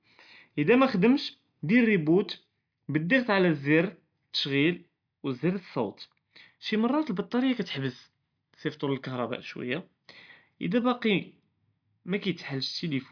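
No technical faults can be heard anywhere in the recording.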